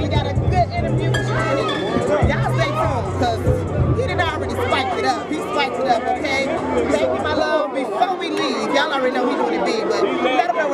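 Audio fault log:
No faults heard anywhere in this recording.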